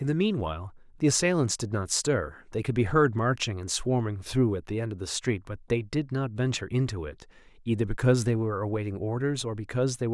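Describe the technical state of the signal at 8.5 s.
At 8.5 s the speech signal is intact, with no audible fault at that moment.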